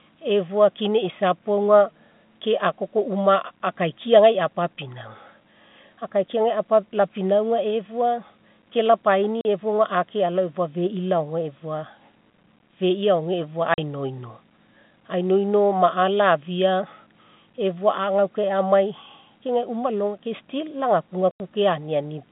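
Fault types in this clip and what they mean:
Packet loss filled with silence: at 9.41 s (just after "lapinauga efua ke"), 13.74 s and 21.31 s the speech cuts out for 40 ms, 40 ms and 90 ms. Missing packets were replaced by silence. The gap lengths fit 10 ms packets, and the gaps have hard edges.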